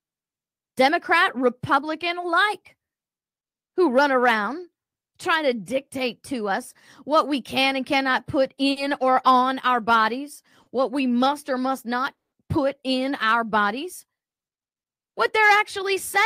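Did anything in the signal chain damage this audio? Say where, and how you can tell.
Yes, the network and jitter buffer stage. Short stalls from a late packet come at 8.71 s after "can and cannot put" and at 10.63 s after "on our bodies". In each, the last sound is held about 50 ms and 30 ms while the receiver waits, then resumes with nothing lost. Unlike a dropout, no sound is skipped.

A call audio freeze follows "must or must not" at 12.17 s. It is a 150 ms silent gap before "put in our bodies". The likely cause is packets delayed in transit, emptying the jitter buffer. It is longer and goes fully silent rather than held, which separates it from the brief stalls.

A jitter buffer speed-up runs from 15.56 s to 16.22 s. The speech plays about 6% fast at unchanged pitch as the receiver trims roughly 50 ms of pitch periods to shrink its backlog. The steady pitch rules out a sample-rate mismatch.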